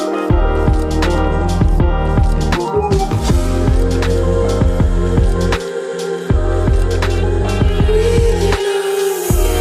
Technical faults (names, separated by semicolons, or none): none